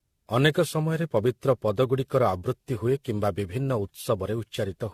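Throughout this speech clip the sound is swirly, hollow and smeared, with blurred consonant attacks, which is generation loss, likely from about ten successive AAC-LC encodes at around 64 kbit/s. A single encode at that rate would not pile up this much noise and spectral gapping.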